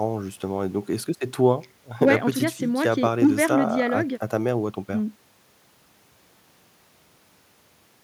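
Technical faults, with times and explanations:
No technical faults can be heard in the recording, and the speech signal keeps steady level and continuity throughout.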